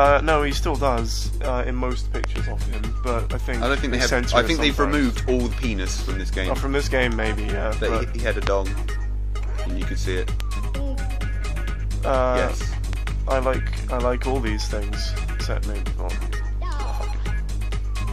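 Loud pops, sharp transients sitting well above the sound, land at 2.24 to 2.38 s as a pair, singly at 8.47 s (the strongest) and 10.40 s, then as another pair from 12.93 to 13.09 s. Each is likely a voltage spike from a switch, plug or static discharge.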